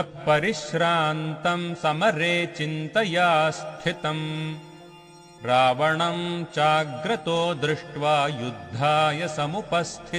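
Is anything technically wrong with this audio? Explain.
Yes. USB whine appears from 3.78 to 5.78 s, a steady tone fixed at 1 kHz lasting about two seconds. The USB bus pulls current in bursts at its 1 ms frame rate, and that periodic load couples into the audio path through shared power or ground, producing a whine at exactly 1 kHz. It sits about 45 dB below the main signal, a faint tone that holds its pitch and then stops.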